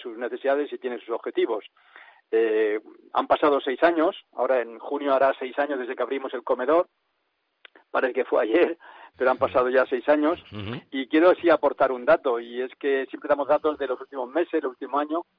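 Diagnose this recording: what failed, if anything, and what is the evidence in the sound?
No faults found anywhere.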